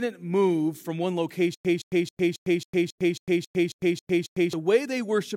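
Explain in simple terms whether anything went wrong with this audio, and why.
Right after "move from one", at 1.55 s, a stutter with silent gaps kicks in: a 169 ms snippet repeats eleven times, each followed by 103 ms of dead silence, until 4.53 s. The player likely stalled and kept replaying its last bit, so whatever belonged there is lost.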